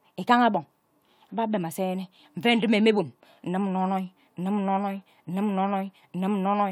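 Nothing stood out on listening to this speech clip.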